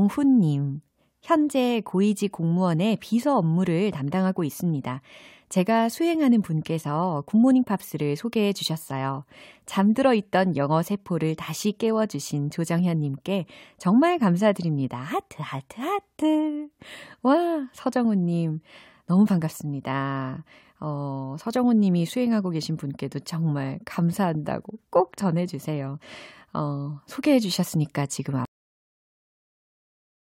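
At 28.45 s, right after "소개해 주셨으니까 지금", the speech has a cut-off end: the final buffers were never written or played out, so the sound stops mid-utterance and falls straight to digital silence, with no natural decay, for the remainder of the clip.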